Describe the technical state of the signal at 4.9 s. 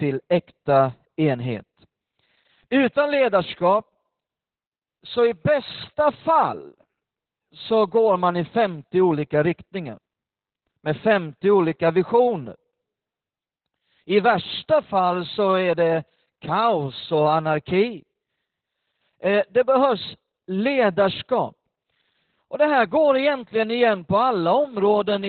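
At 4.9 s the speech carries Opus voice compression, present across the whole clip. Coarse linear-prediction coding leaves it muffled, hoarse and faintly robotic, consistent with narrowband SILK near 8 kbps. That rough, buzzy texture is what separates it from a simple low-pass dulling.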